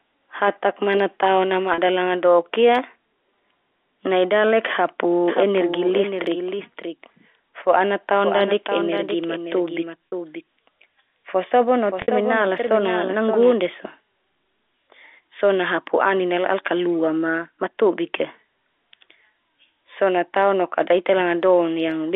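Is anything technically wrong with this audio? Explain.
Yes, a couple of things. Around 1.74, 10.1 and 12.02 s there's packet loss with pitch repetition: gaps of 40, 40 and 60 ms get patched by looping the last pitch period, giving a brief buzzy hold. That fits two or three 20 ms packets going missing. From 5.28 to 13.52 s there's a doubled audio track: a dry, full-band copy trails roughly half a second behind, about 5 dB down, and starts and stops abruptly. That's likely a second, slower capture path mixed in. All of it rides on the narrow 300 Hz to 3.6 kHz band of G.711 telephone coding.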